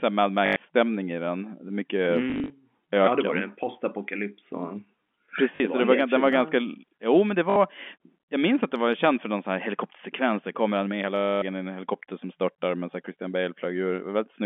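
Packet loss with the last packet repeated occurs at 0.46 to 0.56 s, 2.3 to 2.5 s (single drops scattered across that span), 5.56 to 5.6 s, 7.5 to 7.56 s, and 11.16 to 11.42 s, the longest. Each time, the receiver replays its last packet until new audio arrives. The replayed piece seldom lines up with the pitch. The runs buzz at about 50 Hz, which fits 20 ms packets, giving a robotic stutter over the telephone-band sound.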